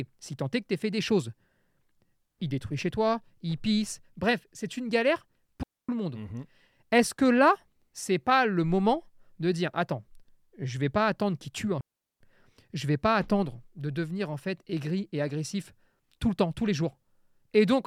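At 5.63 s the speech drops into a clean hole of near silence lasting about 0.26 s, ending at 5.89 s. This is a digital wireless dropout. The radio link lost too much data, so the receiver muted with a very short fade. No noise burst precedes or follows the gap. A second, longer dropout runs from 11.81 s to 12.21 s, muting for about 0.4 s with the same clean edges.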